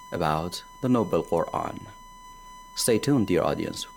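USB whine runs throughout: the bus's 1 ms frame activity leaks through power or ground, leaving a steady 1 kHz tone roughly 20 dB below the sound.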